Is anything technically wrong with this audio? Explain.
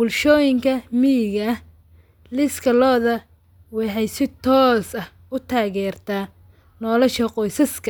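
No, nothing technically wrong stood out on listening to this speech recording.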